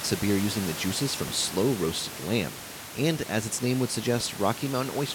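DC steps at 1.28 s, after "beer using the juices", and at 4.21 s, after "as its name would": the waveform's zero line jumps abruptly and then slowly decays back, as a 2 Hz high-pass drains the offset, so each step lands as a low thump beneath unchanged speech.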